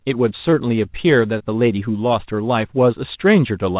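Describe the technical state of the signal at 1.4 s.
A short concealed packet loss from 1.38 to 1.42 s: about 20 ms of speech was missing and rebuilt from the preceding sound, giving a brief smear.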